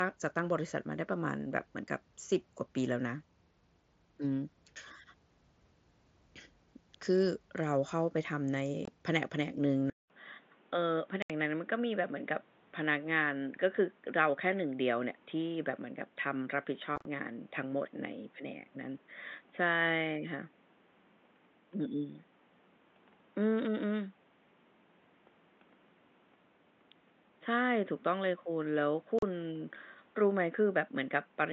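Unconcealed Bluetooth headset packet loss at 8.85 to 8.88 s drops about 22 ms of speech, leaving a hard-edged hole. From 9.9 s, a likely input switch to a poorer device brings a 200 ms silence, then speech cut off above 3.8 kHz with a faint added noise floor and the level roughly unchanged. More packet loss punches gaps at 11.22 to 11.30 s (75 ms), 16.96 to 17.05 s (scattered bursts, longest 30 ms, sounding chopped) and 29.19 to 29.23 s (about 38 ms).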